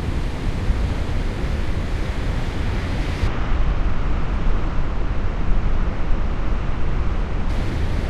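From 3.27 s to 7.49 s the section plays at the wrong speed, running at 0.611 times normal, so the sound turns slow and deep, dropping roughly ten semitones. Speed and pitch shift together, most likely because this stretch was fitted to the wrong clock.

At 7.89 s compressed frames are skipped. The decoder did not play a handful of frames, and the audio jumps ahead by about a tenth of a second.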